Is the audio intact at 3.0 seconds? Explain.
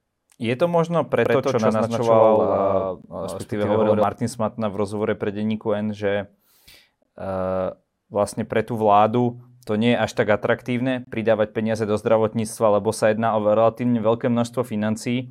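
No. From 1.26 to 4.03 s a doubled audio track runs, likely because a second, slower capture path mixes in a full-band copy about as loud as the original, roughly a tenth of a second late. It sounds like a dry, slapback echo with no room tail. On a spectrogram every feature appears twice, offset in time, and the copy's onset and end are abrupt. At 3.02 s there is a gap between stream segments: a hard-edged 18 ms silence where mismatched segment timestamps leave a hole, which fits 4-second segments. No audio is lost. It is heard as a brief click-like dropout, and it shows as a flat, empty stretch in the waveform and a thin vertical blank band on the spectrogram.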